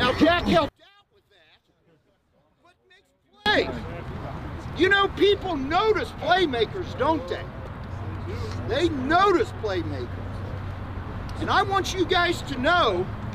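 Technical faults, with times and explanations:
0.69 to 3.46 s, one channel inverted: the sound drops by about 34 dB and what's left is faint, with the centre almost gone, then it comes back at full level. That's the signature of one stereo channel likely flipped in polarity. Anything common to both sides cancels when they're summed to mono, so only the small difference between left and right survives. That residue is what you're hearing.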